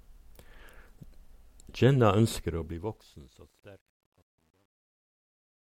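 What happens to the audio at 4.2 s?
At 4.2 s the fade-out is deep into truncation distortion. It runs from 2.30 s to the end, worst from 3.16 s. Too few bits, fitting about 10-bit resolution, turn the fading waveform into coarse steps. The sound turns gritty.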